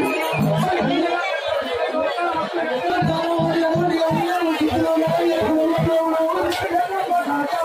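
Sample clock jitter appears at 4.05 s and continues to the end. The converter's sampling clock wanders by something on the order of ten microseconds, so each sample is captured slightly early or late. Where the waveform changes quickly, that timing slip becomes an amplitude error, here sitting roughly 30 dB below the signal. It comes across as a grainy hiss riding on the sound, strongest on loud, bright passages and absent in quiet gaps.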